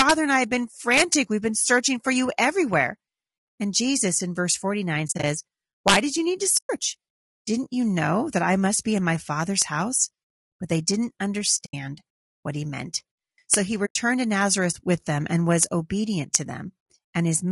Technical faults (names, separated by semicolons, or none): low-delay AAC compression; integer overflow; AAC frame loss with muting